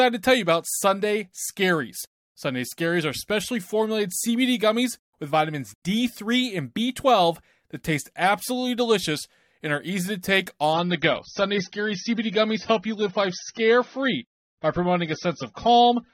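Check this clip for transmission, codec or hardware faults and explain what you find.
One codec fault. From 10.73 s, after "are easy to take", the speech abruptly turns dull and smeary, with nothing above 6.3 kHz. This is an adaptive stream at a lower bitrate, fitting a gapless drop from 96 to 24 kbit/s.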